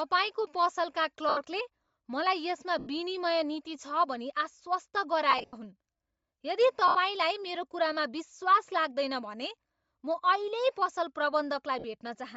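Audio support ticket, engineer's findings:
Breathy, grainy edge on the speech throughout, upper band noisy rather than detailed. Likely Bluetooth LC3 compression; sound fits a low rate near 32 kbps in 10 ms frames, with the encoder zeroing upper spectrum and the decoder noise-filling it.

Lost LE Audio frames: noisy smears fading out at 1.29–1.37 s, 2.79–2.87 s (just before "विनिमय नीति छ भनी"), 5.31–5.53 s (scattered, longest run around 70 ms), 6.88–6.95 s, 11.79–11.84 s. LC3 concealment repeats the last spectrum with random signs, then fades.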